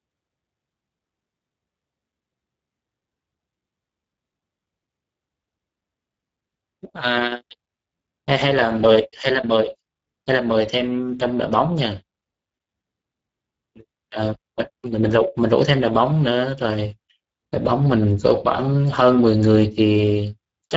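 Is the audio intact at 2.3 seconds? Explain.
No. At 2.3 seconds the speech sounds hoarse and grainy, and nothing is present above 7.7 kHz. This is Speex codec damage, and it runs through the whole clip rather than just this moment. Speex models speech with a CELP predictor, and at this low setting, which fits a bitrate near 10 kbps, too few bits describe the excitation signal. Its upper band above 4 kHz is a shaped, noise-like fill rather than real detail.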